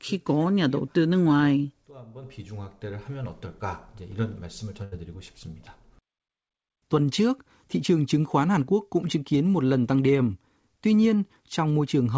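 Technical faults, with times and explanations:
4.84 to 4.94 s, burst of packet loss: several consecutive call packets were lost or arrived too late, so the receiver stretched and faded the last sound for 76 ms, heard as a decaying smear, then resumed with 80 ms of speech skipped.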